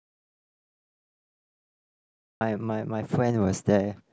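From the very start until 2.41 s the clip is dead silent: an audio dropout to silence already under way when the file begins. The speech then comes in mid-flow rather than with a clean onset. Likely the input was lost, through a disconnected device, failed link or mute, while the recorder kept writing silence. On a waveform the opening is a flat line, and a spectrogram shows only darkness with no room-tone floor until the speech appears abruptly at 2.41 s.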